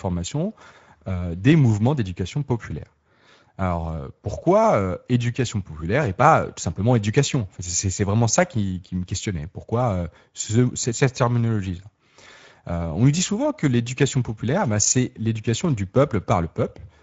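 From start to finish the speech carries Speex codec damage, and it is plainly audible. Too few bits describe the excitation, so the voice sounds hoarse and grainy. A spectrogram shows a hard ceiling at 7.7 kHz and a smeared, noise-like fill above about 4 kHz in place of crisp harmonic detail. This fits a mid-quality wideband mode near 16.8 kbps.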